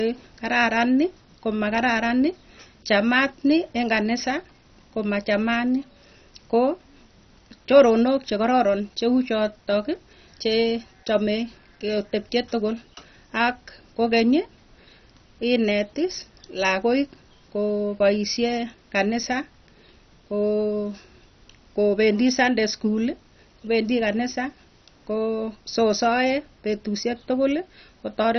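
Throughout, the speech sounds dull and gurgling, with nothing above 6.1 kHz. This is likely heavy MP2 compression, with upper sub-bands starved of bits, which fits about 32 kbps.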